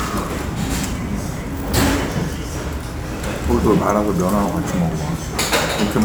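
Sample clock jitter runs through the whole clip: the converter's timing wanders by several microseconds, adding a grainy hiss roughly 25 dB below the sound. Unlike steady background noise, this roughness swells on loud, bright passages and disappears in silence.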